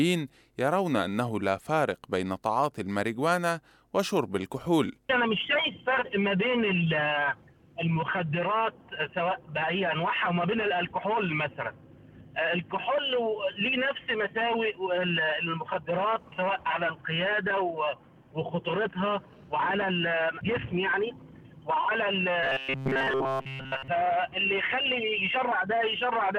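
From 22.43 to 23.88 s, the audio turns into a rigid, metallic buzz at 133 Hz. This is robotic sound from repeated short buffers. Fresh audio likely arrived too seldom, so a fragment of about 7.5 ms was looped, replacing most of the real sound.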